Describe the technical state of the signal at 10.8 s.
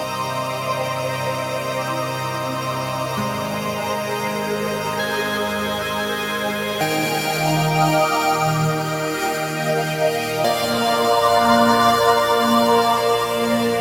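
At 10.8 s the noise suppressor applied to music or sounds is still acting, as it does throughout the clip. Treating sustained content as noise, it ducks held tones and tails by around 5 dB, so the sound pumps. On a spectrogram, sustained bands fade between attacks, and the waveform's envelope dips after each onset.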